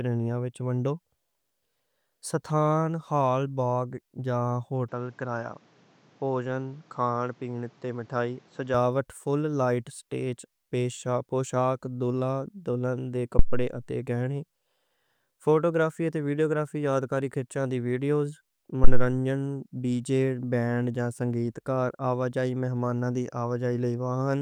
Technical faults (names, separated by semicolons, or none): input switched to a poorer device; phantom power thump